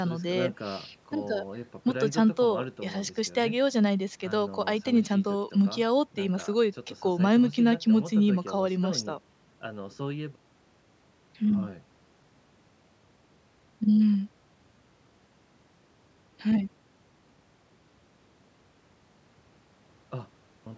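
No technical faults can be heard anywhere in the speech. It has passed through a call's microphone processing, which trims away the lowest bass and leaves nothing above 8 kHz, as that kind of path is meant to.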